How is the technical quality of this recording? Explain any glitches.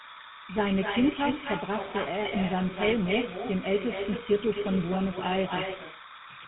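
Technical quality is poor. Three faults run through the whole recording, and they stack on top of each other.

Timecode bleed runs from start to finish. Linear timecode from a nearby track or cable has leaked into the audio path. Because that code is a square wave flipping between two pitches, roughly 1 and 2 kHz, you hear a constant chirpy warble under the speech. It sits something like 20 dB below the speech, and its rhythm fits 29.97 fps code.

There's also echo with no canceller, present the whole way through. The far end is playing the call over a loudspeaker, their microphone picks it up again, and nothing strips it out. Each phrase comes back around a third of a second later, only about 7 dB down. That's loud enough to give every line a thin shadow trailing right behind it.

Finally, the speech has gone through the GSM full-rate codec. The sound points to the old 13 kbps version. 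It rebuilds the voice from a vocal-tract model driven by a sparse, regularly spaced pulse excitation, which is where the buzzy, gravelly texture comes from, and it's plainly audible here. It also cuts everything above 3.9 kHz, so the speech sounds dull and boxed-in, with no air at the top.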